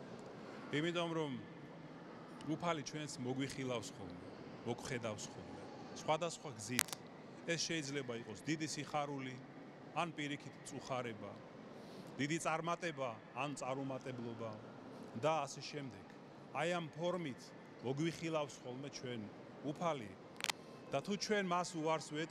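Cable scratch noise appears at 6.78–6.95 s and 20.29–20.51 s: dense, ragged crackle, first louder than the sound, then about level with it, likely from a worn connector being moved.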